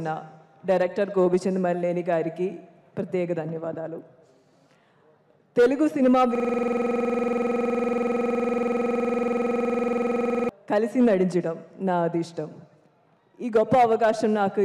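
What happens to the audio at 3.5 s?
Nothing goes wrong at 3.5 s; the audio plays through that moment intact, with no dropout, click or other fault.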